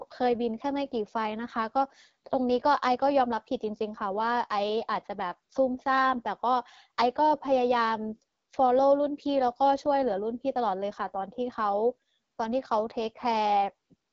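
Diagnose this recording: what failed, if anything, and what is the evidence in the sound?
Codec stage: the whole recording has been through an AMR wideband (HD Voice) codec, and it's plainly audible from start to finish. The speech comes out rough and raspy, and the top end stops dead at about 7.6 kHz. AMR-WB models the voice as pulses driving a vocal tract filter up to 6.4 kHz and fakes the band above with shaped noise. That raspiness points to one of its lowest modes, which fits 8.85 kbit/s.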